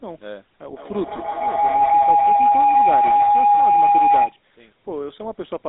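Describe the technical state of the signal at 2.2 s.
At 2.2 s the call is caught in a feedback howl, running from 0.61 to 4.39 s: two devices sharing one room are looping microphone to loudspeaker with gain above unity, so each pass grows. A tone around 700 Hz swells to about 12 dB above the speech, with the loop repeating roughly every 150 ms.

Underneath, the whole line passes through the GSM full-rate codec: the vocal tract is modelled and driven by sparse, regularly spaced pulses, and the band is held to 200 Hz to 3.7 kHz. The speech sounds clearly buzzy and gravelly, which fits a 13 kbps full-rate coder.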